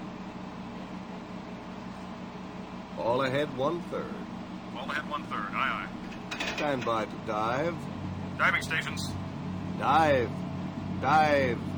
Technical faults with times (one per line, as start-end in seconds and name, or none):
0.00-11.77 imaging from linear upsampling